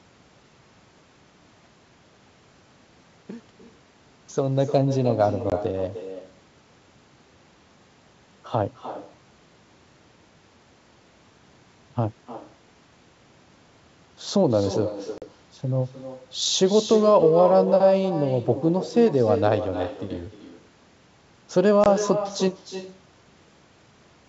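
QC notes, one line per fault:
Throughout: echo with no canceller. Every phrase is shadowed roughly a third of a second later by a thinner copy about 10 dB down, the far loudspeaker feeding its microphone back.
5.50 s, 15.18 to 15.26 s, 21.84 s: packet loss on an ADPCM call. Hard-edged silent gaps of 20, 40 and 20 ms, then speech resumes slightly distorted as the decoder's predictor resynchronises.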